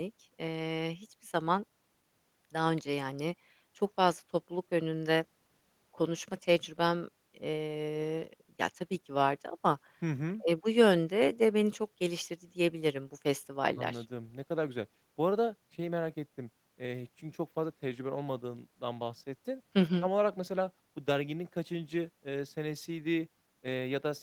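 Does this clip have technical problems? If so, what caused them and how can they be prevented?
No, there's nothing technically wrong to hear in this speech recording, so there's nothing to trace back or guard against here.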